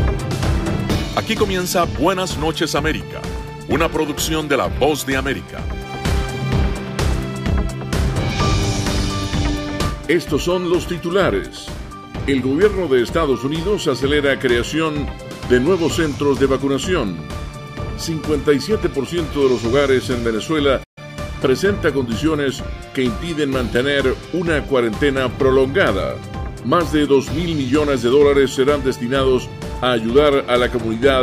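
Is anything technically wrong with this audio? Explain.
Yes, there is one fault. A playback stall occurs at 20.83 s and lasts until about 20.98 s. The sound stops abruptly in mid-flow, and the output goes silent for about 130 ms. Then the audio picks up again. The gap is short but clearly audible as a hiccup. The likely cause is the player briefly running out of buffered data, or its playback thread being held up, so nothing reached the output until it recovered.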